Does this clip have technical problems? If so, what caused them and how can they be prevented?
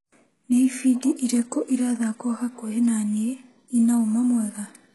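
Yes. Throughout the speech, the treble sounds rebuilt rather than real: sibilants turn gritty and lispy, and nothing reaches above 11.5 kHz. This is likely heavy HE-AAC compression at a very low bitrate, around 12 kbps. Unlike a plain low-pass cut, which leaves the top dull, spectral band replication copies lower bands upward, so the highs stay bright but their harmonics don't line up with the real ones. Encoding at a higher bitrate with standard AAC would prevent it.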